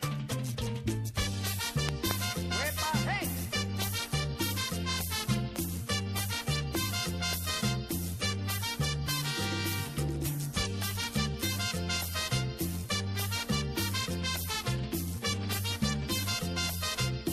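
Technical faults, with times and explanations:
1.89–2.13 s, loud pop: two sharp pops in quick succession, peaking about 25 dB above the sound, likely a sudden voltage pulse from a plug or switch, with the sound continuing underneath.
5.56–5.58 s and 6.75–6.77 s, loud pop: a single brief pop each time, about 15 dB above the sound, likely a static discharge or driver glitch adding a short voltage spike.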